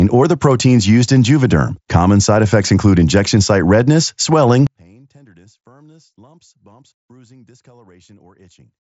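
From 4.67 s, right after "injection site redness swelling", the speech drops by about 34 dB to a faint residue that lasts to the end. The likely cause is one channel inverted: one side's polarity is reversed, so the shared centre content cancels in mono.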